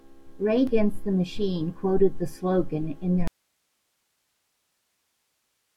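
The signal feed appears to have failed partway through while the path after the break stayed live, most likely a lost connection upstream with the input still open. In this speech recording, that is an audio dropout to a faint residue: right after "quoted the slogan in", at 3.28 s, the voice cuts off abruptly and never returns. From there to the end only a thin hiss remains, around 50 dB below the speech. The cut is instant, with no fade.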